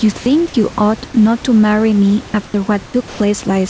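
Throughout the clip there is gain pumping: the background swells in pauses and ducks by roughly 10 dB under each loud syllable, likely from a fast limiter fighting excessive gain. On a waveform the noise floor visibly rises and falls.

From 0.18 to 0.26 s, sound is dropped by the voice detector. About 40 ms of speech is lost within an 80 ms stretch of steady noise, likely because the detector mistook part of the sound for background. A spectrogram shows speech harmonics vanishing into an even, textureless smear.

At 2.46 to 2.54 s, 2.86 to 2.94 s, and 3.08 to 3.20 s, comfort noise replaces the background. It is flat and featureless, first about 5 dB quieter, then about 10 dB quieter, and finally level-matched. Discontinuous transmission is the likely cause. These patches appear as uniform grey blocks with the room noise's fine structure missing, all cut off above 8 kHz like the rest of the call audio.

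The first two patches end with onsets clipped by the voice detector, at 2.52 to 2.54 s and 2.92 to 2.94 s. About 20 ms of each beginning is missing, likely because the detector reacted late, so speech starts abruptly. The waveform jumps straight from noise into speech with no rising edge.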